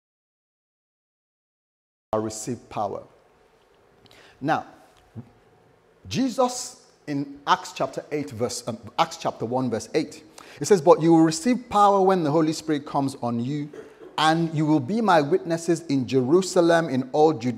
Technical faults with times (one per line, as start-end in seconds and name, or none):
0.00-2.13 audio dropout to silence